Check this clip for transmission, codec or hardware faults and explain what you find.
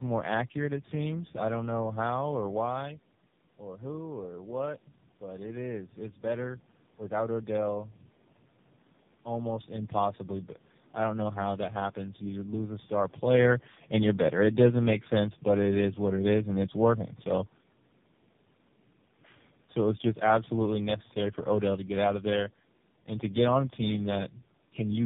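Two faults are present. Throughout the clip there is tandem speech coding. The speech passed through G.729A, GSM full rate and AMR-NB 7.95 kbit/s coders in turn, each recoding the last one's damage. It sounds rough, muffled and warbly, with nothing above 3.6 kHz.

From 13.25 to 17.06 s there is an automatic gain falling. The gain control judged the input too loud, or its background noise too strong, and eased its level down by about 4 dB. Speech and background sink together. The level change the talker makes around 13 s is separate and normal.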